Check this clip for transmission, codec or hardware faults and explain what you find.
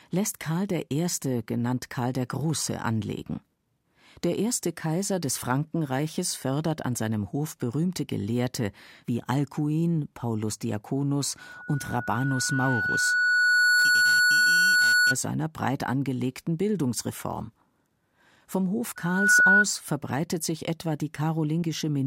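Two bursts of loudspeaker feedback squeal: a 1.5 kHz tone swells over roughly two seconds from 11.40 to 15.17 s, ending before "breit angelegten", then rises faster from 18.96 to 19.65 s before "verbreitet sich etwa", peaking about 10 dB above the speech. The microphone re-amplifies its own loudspeaker, with loop gain exceeding one at that frequency.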